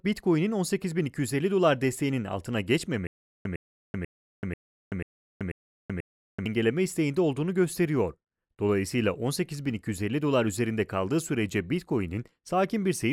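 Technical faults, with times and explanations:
3.07 to 6.46 s, stutter with silent gaps: just after "dolar desteğinin altına", the speech locks onto a fragment about 108 ms long and repeats it 7 times, each repeat followed by about 381 ms of dead digital silence, giving an even cycle of roughly 489 ms. This is likely a playback or stream stall, where each retry replays the last buffered fragment and then runs dry. The speech meant for that span is lost, and normal audio resumes at "isteğinde olduğunu gösteriyor".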